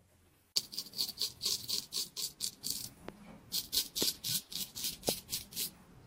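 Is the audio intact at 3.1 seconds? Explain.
No. A loud pop sits from 3.09 to 3.11 s. It is a single sharp pulse, standing well above the surrounding sound, which continues underneath. A sudden voltage spike is the likely cause, possibly from a switch or a static discharge.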